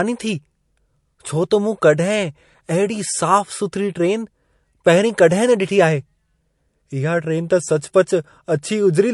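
Low-bitrate audio saved at a high bitrate runs throughout the speech: nothing sounds above about 11.3 kHz, and the smeared, swirly codec artefacts persist. This is likely MP3 near 48 kbit/s re-encoded at a much higher rate, which cannot restore the discarded detail.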